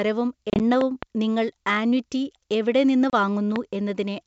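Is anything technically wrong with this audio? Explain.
Yes. Two kinds of fault are present.

Packet loss on an ADPCM call occurs at 0.50 to 0.61 s and at 3.10 to 3.13 s. In the first, about 60 ms is lost in runs of up to 30 ms scattered across 100 ms. In the second, about 30 ms drops out, which fits about three lost packets. The silenced gaps push the decoder's predictor and step size out of step with the sender's, so after each hard-edged hole the speech comes back slightly distorted.

Loud pops occur as two at 0.81 to 1.05 s and one at 3.56 to 3.58 s, each peaking roughly 15 dB above the speech. Each is likely a sudden voltage step or pulse from a plug, a switch, static or a driver glitch. It is heard as a sharp pop with the speech continuing underneath.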